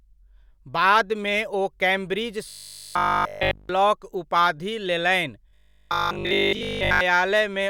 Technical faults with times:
2.49-3.69 robotic sound from repeated short buffers
5.49-7.01 robotic sound from repeated short buffers

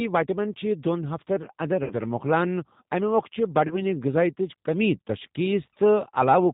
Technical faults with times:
0.00-6.53 G.729 codec
1.84-1.94 VoIP packet loss concealed by the speech codec
3.67-3.80 VoIP packet loss concealed by the speech codec

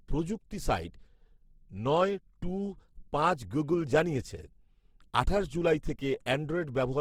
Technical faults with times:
0.00-7.00 Opus compression

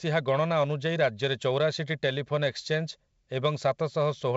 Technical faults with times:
none

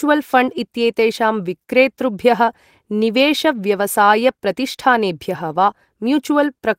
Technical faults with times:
5.71 short concealed packet loss

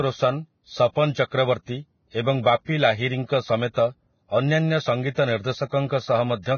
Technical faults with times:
0.00-6.58 Vorbis compression

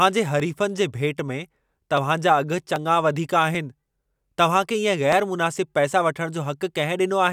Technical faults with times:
0.40-6.70 clock drift buffer slips

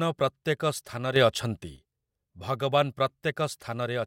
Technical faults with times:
1.16-1.76 sudden gain jump

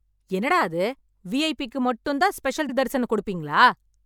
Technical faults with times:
2.68-2.73 repeated frames

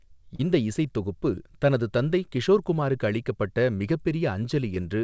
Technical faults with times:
0.36-0.40 short concealed packet loss
2.74-2.76 short concealed packet loss
4.75-4.77 short concealed packet loss

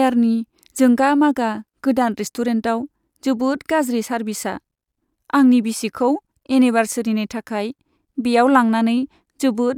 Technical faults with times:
none

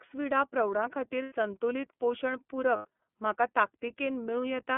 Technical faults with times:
0.00-4.77 iLBC codec
1.23-1.32 lost iLBC frames
2.76-2.85 lost iLBC frames

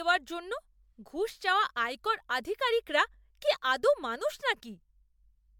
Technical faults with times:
0.00-5.59 generation loss

